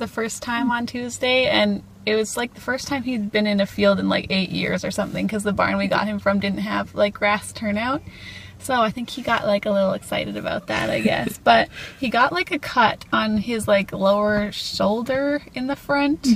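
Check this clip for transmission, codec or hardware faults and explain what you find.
Nothing in this one catches the ear as a transmission, codec or hardware problem, so there's nothing here to flag.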